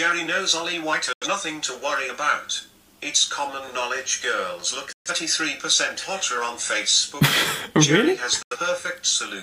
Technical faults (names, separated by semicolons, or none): digital broadcast dropout